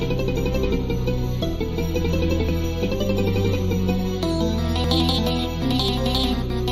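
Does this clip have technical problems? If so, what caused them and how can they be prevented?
Yes. A small jump in the sound at 2.49 s and 4.84 s is likely a dropped buffer (overrun): roughly 10 and 20 ms go missing and the edges join directly, with no silent gap, unlike a dropout. A larger buffer or higher-priority audio thread prevents this.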